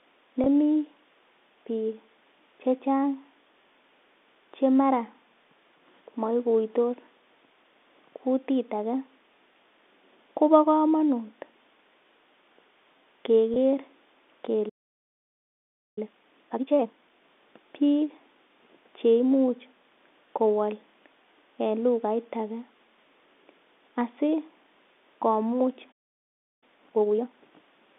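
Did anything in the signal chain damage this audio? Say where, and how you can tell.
Yes. At the network stage, what sounds like a single 20 ms packet went missing at 0.44 s and again at 13.54 s. The receiver covered each gap with packet loss concealment by pitch repetition, looping the last pitch period, so each spot sounds briefly held and buzzy.

At the playback stage, the output goes silent in mid-flow from 14.69 to 15.98 s, about 1.28 s, and again from 25.91 to 26.63 s, about 0.7 s. Each playback stall is likely caused by the player's buffer running dry or its thread being blocked.

Right after each stall, the player clears its backlog with time-compressed catch-up, trimming and cross-fading small pieces of audio to run at 2x speed. From 15.98 to 17.24 s and from 26.63 to 27.33 s the audio sounds hurried at normal pitch. The G.711 telephone band sits underneath throughout.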